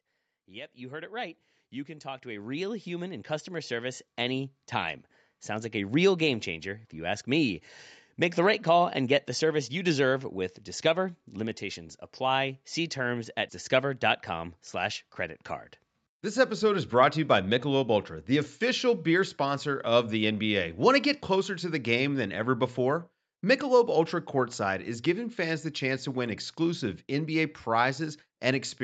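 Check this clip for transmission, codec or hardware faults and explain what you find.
One fault stands out, an automatic gain rise. From 0.33 s to 7.26 s the speech and the background noise beneath it swell together, climbing by about 18 dB over nearly seven seconds. The automatic gain control judged the input too quiet and kept pushing its gain upward. The band stopping at 8 kHz comes from the call path.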